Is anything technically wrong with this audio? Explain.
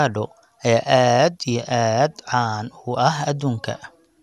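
Yes. Throughout the speech there is generation loss. The sound is swirly and hollow, consonant attacks are smeared, and nothing is present above 12.6 kHz. This is likely the result of encoding with a lossy MP2-type codec about three times in a row, consistent with around 128 kbit/s per pass. Each re-encode quantises the signal again on a shifted frame grid, so the noise from every pass adds up.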